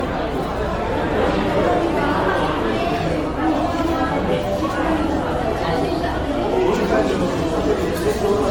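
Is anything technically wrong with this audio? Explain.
Yes. Generation loss runs throughout the whole recording. The likely cause is repeated lossy encoding, around seven times over, with the sound pointing to AAC-LC at about 96 kbit/s. Each re-encode quantises the material afresh on a shifted frame grid, so the errors pile up rather than cancel. The result is swirly and hollow, with smeared, softened attacks, more degraded than that bitrate alone would give, and nothing remains above 18.6 kHz.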